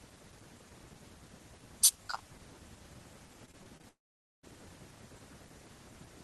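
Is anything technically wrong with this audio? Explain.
Yes. Repeated packet loss (robotic sound), 3.45 to 3.85 s: five short gaps, longest 21 ms, each patched by extending prior sound, giving choppy speech with pieces missing. Long network dropout, 3.89 to 4.45 s: a brief fading fill, then about 480 ms of silence before speech resumes with roughly half a second missing, likely from lost audio.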